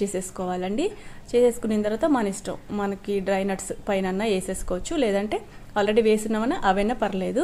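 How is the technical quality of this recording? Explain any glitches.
No glitches turn up here: nothing breaks, stutters or drops out anywhere in the recording, so there's nothing to explain.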